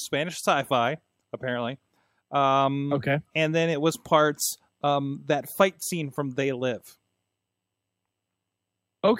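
No technical faults are audible.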